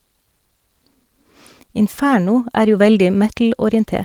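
Nothing technical goes wrong anywhere in this speech, which comes through Opus voice compression in its hybrid mode with the full audio band intact.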